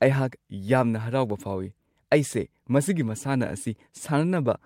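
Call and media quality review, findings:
No faults found in the speech signal; level, continuity and timing show no audible transport, device or processing problems.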